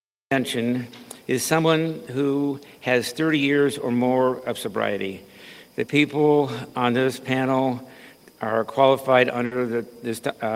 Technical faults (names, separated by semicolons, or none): cut-off start; burst of packet loss